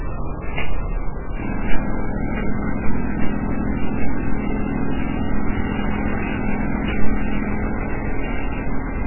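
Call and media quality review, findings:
Whole clip, 0 to 9 s: dull, muffled sound with nothing above 2.9 kHz, a watery, swirling texture and smeared attacks. Likely MP3 compression. The damage fits a very low bitrate of around 8 kbps. The encoder cut the treble at a fixed point and dropped weak frequency lines, which flicker on and off frame to frame.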